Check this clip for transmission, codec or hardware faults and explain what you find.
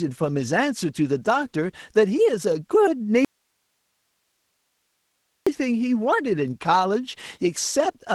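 Two faults are present: codec damage throughout, and one long dropout.

Opus voice compression runs through the whole clip. The speech sounds muffled, hoarse and slightly robotic. The damage is plainly audible. This fits Opus in hybrid mode at a low rate, around 16 kbps. A linear-prediction core codes the lower band. A thinner transform layer covers the top above 8 kHz. The excitation is coded coarsely, so the speech loses its clean texture.

An audio dropout to a faint residue runs from 3.25 s to 5.47 s, about 2.2 s in all. The speech cuts out abruptly and comes back just as suddenly. It does not fade. The gap holds only hiss, far below the speech, roughly 50 dB down. The likely cause is a lost signal feed while the path after the break stayed live. That live path is what carries the hiss.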